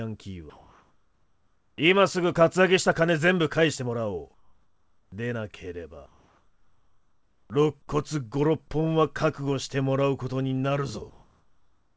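From 0.50 to 1.78 s, 4.34 to 5.12 s, 6.06 to 7.50 s and 11.10 s to the end, the quiet background turns into a steady, featureless hiss. It is level at first, about 4 dB quieter in the second and third gaps, and about 2 dB louder in the last, all sitting roughly 45 dB below the loudest passages. This is comfort noise in place of the background, likely because the sender stopped transmitting during pauses and the receiver synthesised shaped noise instead.

At 7.44 s the returning sound starts abruptly, missing its first 60 ms and its soft attack. The likely cause is an onset clipped by the voice detector, which reacted late, so comfort noise ran on over the beginning. Through all of this, the call path's codec leaves nothing above 8 kHz.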